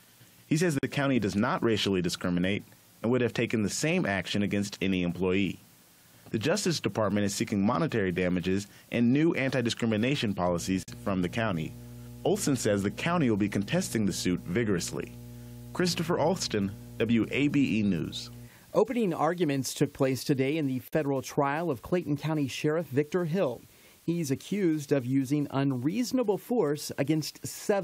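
A constant, even hiss sits under the speech for the whole clip, with no grit or distortion riding on the voice, at roughly 30 dB below the signal. This is low bit depth with dither. The noise floor fits 8-bit audio. Random dither was added before the samples were rounded to so few levels, so the rounding error became a steady white noise rather than distortion that follows the signal.

At 0.79 s the speech drops out abruptly for about 45 ms and then carries on from exactly where it stopped. The edges of the hole are slightly softened rather than razor-clean. This is a gap at a join of encoded pieces. The audio was encoded in separate chunks and spliced back together without trimming. Each chunk's encoder start-up delay and its padded final frame were both left in, leaving a short stretch of silence at the seam.

From 10.45 s to 18.50 s a steady low tone at 60 Hz appears beneath the speech, with some buzzy low harmonics, at roughly 15 dB below the signal. 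This is mains hum. A ground loop or a nearby transformer let the 60 Hz power line leak into the signal path.

Within that hum, at 10.83 s, the same kind of dropout returns, this time about 48 ms long. It comes again at 20.88 s, also about 48 ms. Together with the first gap, these fall every 10 s, which points to the audio having been encoded in 10-second pieces, with each join adding its own silence.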